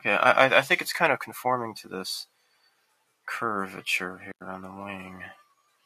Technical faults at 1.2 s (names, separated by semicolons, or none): noise suppressor applied to music or sounds